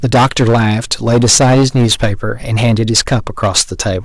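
From start to finish, every loud syllable carries a harsh, buzzy fuzz. This is hard clipping: the speech was driven about 15 dB beyond what the signal path could pass, so around a tenth of the samples have their peaks sliced flat, spraying added high harmonics.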